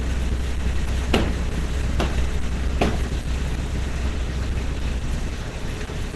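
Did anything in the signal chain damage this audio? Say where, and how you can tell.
Yes. The damage sits at the codec stage and runs through the whole clip: the audio has a hard ceiling with nothing above 12 kHz, and tonal parts sound grainy, hoarse and muffled. This is likely Opus compression, working in its hybrid speech mode at a rate that fits roughly 16 kbps. MP3 damage would show swirling, watery artefacts from bands dropping in and out. Here the bands stay filled, and the roughness sounds noise-like.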